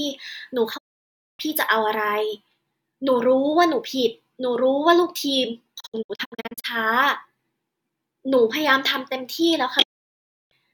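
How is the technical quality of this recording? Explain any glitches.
The speech drops out three times, and each one is a digital broadcast dropout. At 0.76 to 1.41 s and again at 9.82 to 10.53 s, the receiver evidently lost valid frames, so it muted with a quick 20 ms fade and cut everything sent during that gap. From 5.79 to 6.66 s it's choppier, with a series of short holes, the longest about 64 ms, adding up to roughly 0.4 s missing. You don't get noise or repeats, just clean silence until decoding resumes.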